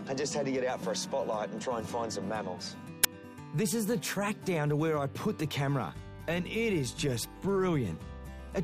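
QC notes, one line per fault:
3.04 s, uninitialised buffer: a sudden, loud burst of harsh digital noise lasting only about 12 ms, sharply cut at both ends. One block of output went to the converter before any audio had been written into it, so whatever leftover values sat in that memory were played as if they were samples. The burst's length fits a 512-sample block, pointing to a single unfilled buffer.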